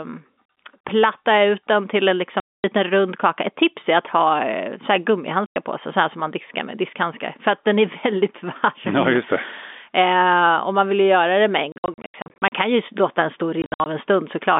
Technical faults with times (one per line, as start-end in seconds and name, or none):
2.40-2.64 packet loss filled with silence
5.46-5.56 packet loss filled with silence
11.72-12.52 packet loss filled with silence
13.62-13.86 packet loss filled with silence